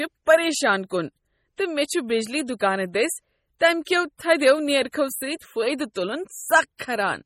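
Heavy MP3 compression at a low bitrate, likely a 32 kbps encode, runs through the whole speech clip: weak frequency lines flicker between frames, giving a watery, swirly texture with metallic chirps on s sounds and smeared attacks, and nothing remains above 18.2 kHz.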